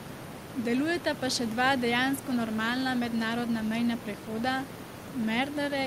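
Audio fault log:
Nothing stood out on listening to this speech, with only the room's own background noise sitting about 12 dB beneath it.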